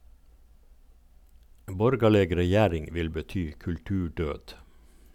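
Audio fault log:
2.4–5.14 s, resampler restarted on every block: A steady 50 Hz buzz rides on the speech. It comes and goes with the signal. Each 20 ms block was rate-converted on its own. The converter's filter had no real neighbouring samples at the block edges. So every edge carries a small error. At this short block length, those ticks fuse into a buzz at the block rate. The conversion sounds like 44.1 kHz to 48 kHz.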